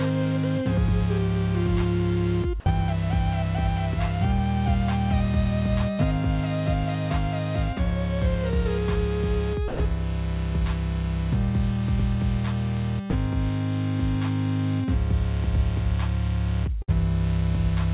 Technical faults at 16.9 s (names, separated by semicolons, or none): burst of packet loss